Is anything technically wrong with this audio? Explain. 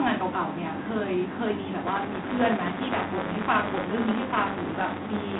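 Yes. G.726 ADPCM coding runs throughout. Each sample is sent as a coarse difference from an adaptive prediction, so the error rides on the speech as a harsh, rasping hiss, consistent with 24 kbit/s. The band spans 150 Hz to 3.6 kHz, with nothing above 3.8 kHz.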